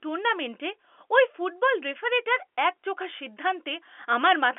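No technical faults are audible in this speech.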